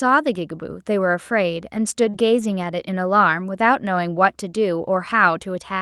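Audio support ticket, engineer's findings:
Brief rough, grainy patches at 1.75, 2.03, 2.13, 2.39, 2.43, 2.51 and 2.63 s, each about 20 ms. Lost packets rebuilt from error correction: the decoder played the low-bitrate Opus FEC copies, so no gaps, just coarser, noisier frames.

Short smeared wobble from 2.09 to 2.15 s. Short concealed packet loss: about 40 ms never arrived in time, so the receiver extended the preceding sound, then blended back into the real audio.

All of this rides on Opus with audio band-limited near 12 kHz.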